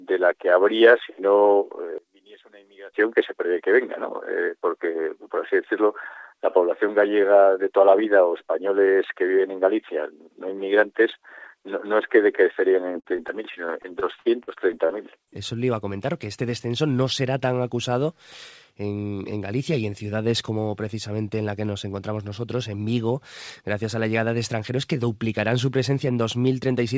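From 1.98 to 2.93 s the level drops by about 26 dB and the centre nearly vanishes, likely one channel inverted, cancelling when summed to mono. Then from 13.0 to 15.29 s, on a call path with nothing above 8 kHz, repeated packet loss leaves choppy, robotic sound with about a dozen short holes patched over, the longest near 53 ms.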